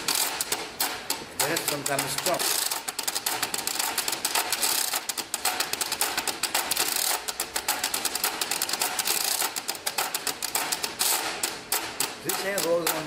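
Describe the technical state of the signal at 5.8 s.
At 5.8 s the receiver is in the middle of a jitter buffer speed-up that runs from 5.00 to 5.98 s. Its buffer had built up more audio than its target, as happens when delayed packets arrive in a bunch, so it cut short pitch-period-sized pieces again and again, removing about 70 ms in total. The audio therefore plays at 107% of normal speed with its pitch unchanged, sounding slightly hurried through this stretch.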